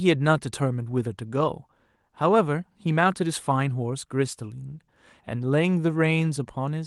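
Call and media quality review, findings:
No faults found in clip.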